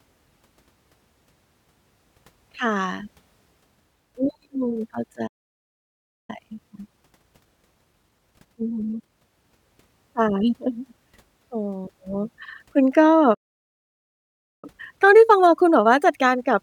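A speech clip with two playback stalls, where the sound just drops out for about 1.0 s at 5.27 s and about 1.3 s at 13.34 s, likely the player running dry or its thread getting blocked. Each one is followed by time-compressed catch-up, from 6.30 to 9.30 s and from 14.65 s to the end, where the speech hurries along at 1.15x speed at normal pitch.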